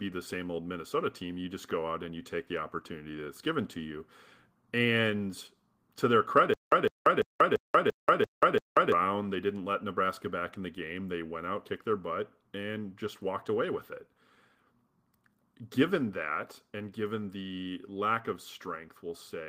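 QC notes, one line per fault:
6.54 to 8.92 s, stutter with silent gaps: the same 155 ms burst of speech plays 7 times, each repeat followed by about 186 ms of silence, giving an even 341 ms cycle. This is likely a stalled player or stream that replays its last fragment on each retry and then runs dry. The silences between repeats set it apart from a plain loop or skip, and the steady period sets it apart from random dropouts. The audio for that span is lost.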